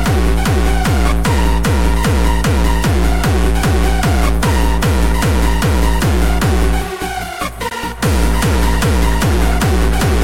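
From start to finish, a fine hiss and grainy roughness ride on top of the sound, thickening on loud and bright passages and disappearing whenever the audio falls silent. This is sample clock jitter: the converter's timing wanders by a few microseconds, so each sample lands slightly early or late. Where the waveform changes quickly, that timing slip becomes an amplitude error, here sitting around 35 dB below the signal itself.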